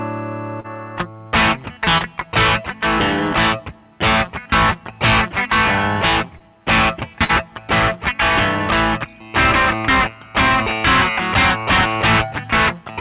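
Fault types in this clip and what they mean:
short concealed packet loss: Three times, 20 to 40 ms of packets missed the decoder, which stretched the preceding sound to cover them, leaving brief smears.
burst of packet loss: Around 7.24 s, about 40 ms of audio was lost; the receiver filled roughly 50 ms with a fading continuation, then playback skipped ahead.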